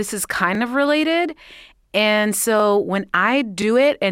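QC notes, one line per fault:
0.55, 1.58, 2.60 and 3.62 s: overlapping chunks. Each 1 s chunk starts 23 ms early, replaying that sliver at the join and causing a regular stutter.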